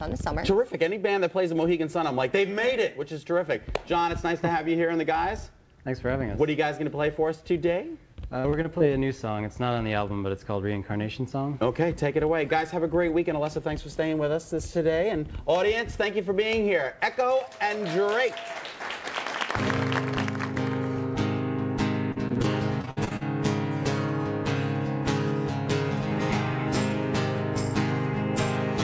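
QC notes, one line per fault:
8.40–8.82 s, repeated packet loss (robotic sound): four quick dropouts of up to 41 ms, each patched by stretching the last bit of sound, so it goes choppy.
22.12–23.23 s, same thing in two bursts (22.12–22.46, 22.82–23.23): gaps up to 58 ms, with about 41% of the second burst patched over, so it goes choppy.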